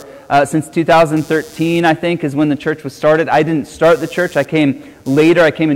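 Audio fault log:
throughout, computer activity noise: a buzzing, chirping layer sits about 30 dB below the sound, pulsing at around 150 Hz. It rises and falls with nothing in the audio itself, which points to processor or peripheral load disturbing the shared ground of the audio circuit. Mains hum would hold a steady 50 or 60 Hz tone with its harmonics; this one stutters and shifts as the computer's workload changes.
throughout, hard clipping: the signal is driven about 8 dB past what a stage in the chain can carry, so peaks are sliced flat and a few percent of the waveform sits pinned at the limit. Those squared-off tops add harmonics high in the spectrum, heard as a harsh fuzz riding every loud moment. Soft saturation or limiting would round or pull down the peaks more gently, without this abrupt, gritty edge.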